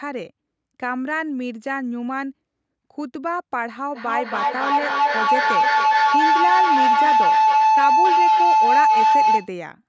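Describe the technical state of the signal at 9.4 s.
At 9.4 s a feedback howl is sounding. It runs from 3.94 to 9.58 s. Two devices in the same room share the call, and each trip around the loop adds level. The tone sits around 1 kHz, the loop repeats roughly every 300 ms, and the howl peaks about 9 dB above the speech.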